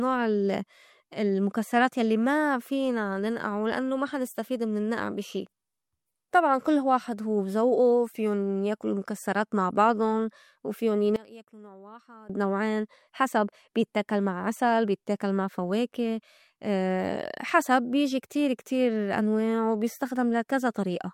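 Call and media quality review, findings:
One channel inverted, 11.16–12.30 s, ending just before "نوعين حسب بيتّاكل مع": speech drops about 22 dB when summed to mono, leaving only a faint residue. Likely a polarity flip on one stereo leg cancelling the centred content. Waveform shows an abrupt envelope collapse; spectrogram energy thins across the band.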